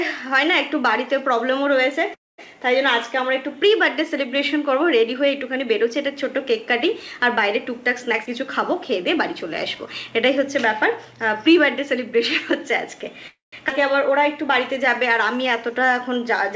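At 2.14 to 2.40 s, and again at 13.28 to 13.54 s, there is a call audio freeze. The last sound trails off into silence for about 0.21 s and then 0.15 s, likely because packets stalled and the jitter buffer ran dry. The sound then resumes where it stopped, so nothing is lost. A dropout would remove content instead.

From 8.12 to 11.43 s a jitter buffer speed-up makes the sound run at 107% with its pitch unchanged. About a third of a second is trimmed as tiny pieces, so it sounds hurried rather than clipped.

At 13.68 to 13.71 s a skip ahead jumps past about a tenth of a second with almost no gap. Unlike the freeze just before it, this removes content.

A jitter buffer slow-down follows at 13.80 to 14.84 s at 97%, adding 39 ms. Another runs at 15.38 to 16.25 s at 92%, adding 73 ms. Repeated pitch periods stretch the sound at the same pitch, giving a drawn-out quality. The sound comes over a G.722 call path with nothing above 8 kHz.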